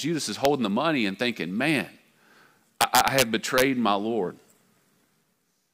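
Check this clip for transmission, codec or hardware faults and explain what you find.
Violent, sharp cracks break into this speech at three points, the mark of integer overflow. The first is a single snap at 0.45 s, just before "the money and thinking". The second is a burst of cracking from 2.81 to 3.22 s, and the third is a shorter crackle from 3.58 to 3.62 s. Where the audio should have been limited at full scale, each peak that ran past the largest integer value wrapped around to the opposite sign, swinging across the whole range in one sample. Those swings are far harsher than ordinary clipping. The longest burst carries the loudest peaks, pushed about 6 dB over the limit, while the last is about 2 dB over and the first sits right at the limit.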